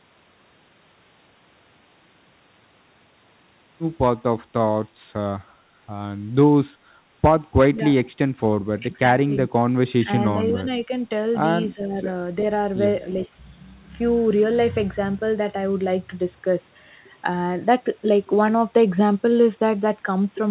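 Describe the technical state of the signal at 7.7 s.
From 7.72 to 7.8 s the speech dips by roughly 10 dB, likely speech suppressed in double talk, where the echo canceller attenuated the talker while the far side spoke.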